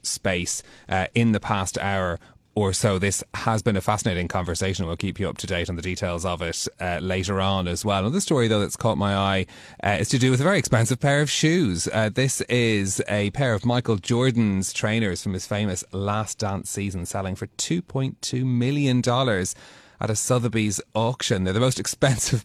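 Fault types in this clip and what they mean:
Nothing stood out on listening to this speech clip.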